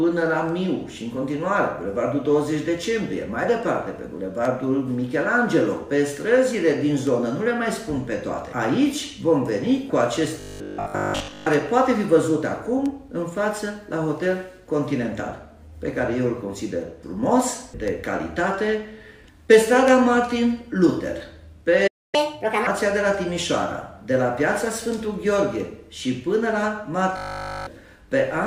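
From 10.40 to 11.48 s and again from 27.17 to 27.67 s there is robotic sound from repeated short buffers: a rigid, metallic 50 Hz buzz that only loosely tracks the underlying audio. It likely comes from 20 ms blocks being repeated, most of the first stretch and all of the second, while fresh data was missing.

At 21.87 s a playback stall silences the output for about 0.26 s. The sound cuts off abruptly, most likely because the player ran dry or its thread was blocked.

From 22.15 to 22.67 s there is catch-up at higher speed. Playback runs at 1.5 times normal speed, raising the pitch by roughly seven semitones.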